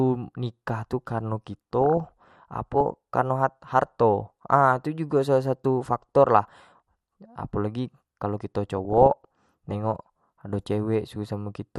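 Speech, heard throughout with a dull, band-limited quality and a gurgling, granular edge. The upper frequencies drop in and out and what remains sounds coarsely quantised. This is most likely MP2 compression at a low bitrate, consistent with around 80 kbps. At that rate the encoder cannot give bits to all 32 sub-bands, so it switches off the upper ones and spreads the remaining bits thinly over the rest. The damage is plainly audible. Two bursts of DAB burbling run from 1.81 to 2.81 s and from 8.78 to 9.75 s. Each lasts about a second, with burbling laid over the speech. Residual bit errors, at a rate in the region of a few tenths of a percent, have got past error correction into the MP2 data. Corrupted samples put short blips of noise into single sub-bands, and corrupted scale factors make sub-bands jump in level for up to a frame, and 42 frames were hit in each burst.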